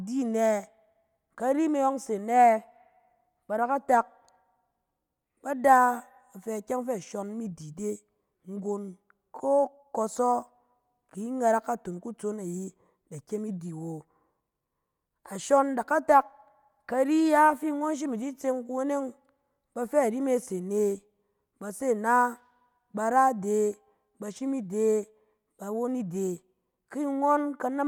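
Speech recording, no technical faults detected.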